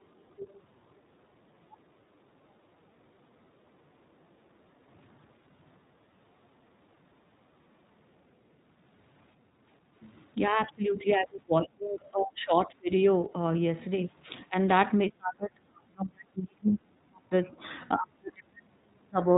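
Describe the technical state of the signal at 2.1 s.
At 2.1 s the echo canceller is clamping down on the microphone while the far end plays, so background gated by the echo canceller shows up from 2.07 to 2.36 s: the room sound sinks by about 6 dB for roughly a fifth of a second, then returns.

Underneath this, the whole clip has passed through the iLBC codec, and its damage is plainly audible. Each short frame, consistent with 20 ms blocks at roughly the 15.2 kbps mode, is coded on its own, and nothing above 4 kHz survives. The speech sounds band-limited, slightly rough and synthetic.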